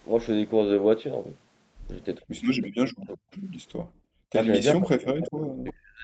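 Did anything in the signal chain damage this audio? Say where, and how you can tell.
Yes. The damage happens in the call processing stage, at the echo canceller. The speech dips sharply at 2.19–2.25 s by roughly 25 dB, then at 2.61–3.26 s and from 4.74 s to the end by roughly 40 dB. This is speech suppressed in double talk. The likely cause is the canceller mistaking the talker for loudspeaker echo and turning everything down.

There is also echo leak from the same stage. A faint delayed copy of the speech appears at 3.31–3.38 s, about 35 dB below the speech, with a 374 ms delay. A second copy appears at 5.67–5.73 s, about 25 dB down, with a 346 ms delay. Residual loudspeaker pickup likely slipped past the canceller.

The background is gated by the echo canceller at 3.78–4.32 s. The room sound falls away by about 34 dB for roughly half a second, then returns. The canceller clamped the microphone hard while the far end played, and the ambience vanished with it.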